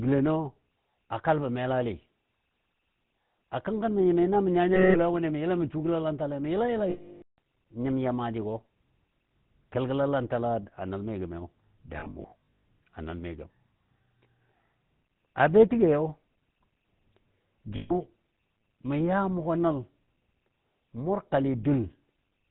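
Throughout, the speech carries the buzzy, gravelly roughness of the GSM full-rate codec, consistent with 13 kbps coding. The vocal tract is modelled and excited by a thinned, regularly spaced pulse train, and nothing above 4 kHz survives, so the damage is plainly audible.

Lost GSM frames occur at 4.74 s for 0.2 s, just before "wʊnɨ mə yəla mə", and at 6.9 s for 0.48 s, after "gəlalantale mə yəla yəlan". From 12.0 to 12.63 s, between "a nəl mi gəmiyo" and "a nəl", about 0.38 s of losses are scattered in runs of up to roughly 0.1 s. A final loss at 17.76 s lasts 0.14 s. Each gap repeats the last good frame, giving a rough metallic ring. The 0.48 s loss is cut to silence before the speech returns.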